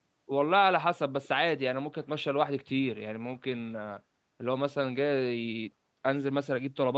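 Around 1.24 to 1.28 s there's a brief, very faint ghost of the speech: a delayed copy trailing the original by about 242 ms, sitting well under the main talker. It sounds like an echo leak, likely from the far end playing the call on a speaker where the echo canceller didn't fully scrub what its mic picked up, so a short scrap got sent back. The audio tops out around 8 kHz, consistent with the call path.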